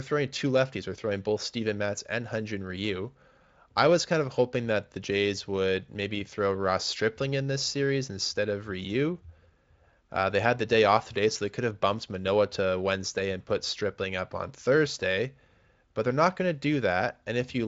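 Speech clip, no technical faults found.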